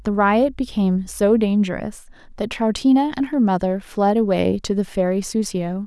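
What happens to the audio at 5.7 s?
At 5.7 s the speech plays through intact, with no dropout, click or other fault at that point.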